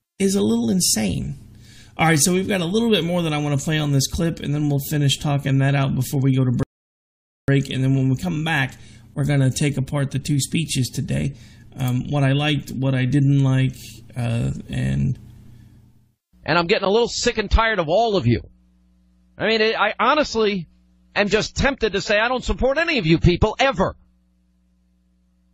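A rebuffering stall interrupts the audio from 6.63 s to 7.48 s. The player has used up all the audio it had downloaded, so playback halts and waits for more data to arrive. The sound drops abruptly to silence for about 0.85 s, then picks up again exactly where it stopped, with nothing skipped or repeated. Because no material is lost, the only effect is that the clip runs roughly 0.85 s longer than it should.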